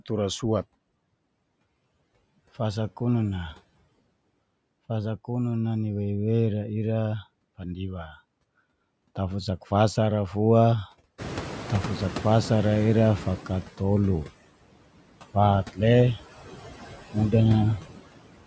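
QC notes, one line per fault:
Throughout: noise suppressor artifacts. It's pulling steady noise down by about 20 dB frame by frame, so the background dips between phrases and swells under speech.
7.58 to 8.18 s: speech cut by the noise suppressor. It mistook quieter speech for noise and ducked it by up to about 12 dB, around a third of a second in total, so those bits sound swallowed.
11.18 to 13.72 s: noise suppressor catching up. Room noise jumps about 18 dB near 11 s, and the stale noise estimate only manages about 12 dB of cut at first, taking roughly 2.5 s to settle back down.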